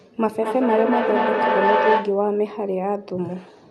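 From 0.38 s to 2.27 s a feedback howl builds near 1 kHz, pulsing roughly every fifth of a second, as the speaker-to-microphone loop regains level each trip. It peaks about 2 dB above the speech, a bright horizontal spectrogram line over a swelling waveform envelope, beneath the call codec's cutoff near 12 kHz.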